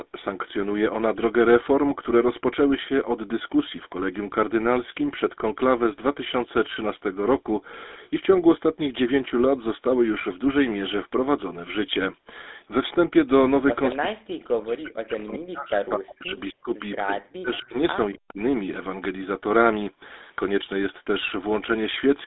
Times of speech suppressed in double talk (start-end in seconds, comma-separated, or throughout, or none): 13.97-16.73, 18.13-18.40